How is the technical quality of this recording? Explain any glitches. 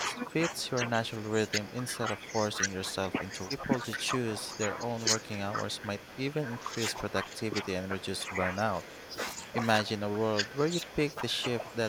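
The quality is poor: two call-processing faults from echo cancellation run through the whole recording.

Speech suppressed in double talk, 0 to 11.9 s: the echo canceller likely could not tell the local talker apart from loudspeaker echo while both sides spoke, so it turned everything down. The speech dips by up to about 15 dB and thins or drops out in pieces, affecting around ten seconds of the clip in total.

Echo leak, at 1.47–1.51 s, 2.58–2.65 s, 3.90–3.96 s, 5.19–6.48 s, 7.83–9.15 s and 10.53–11.15 s: the far end's canceller likely failed to remove all of the speech its microphone picked up from the loudspeaker, so some was sent back. A copy of the speech trails 236 ms behind, as brief scraps in the first three spots and longer stretches later. It sits about 15 to 20 dB below the speech in most places, rising to about 5 dB below at 2.6 s and 3.9 s.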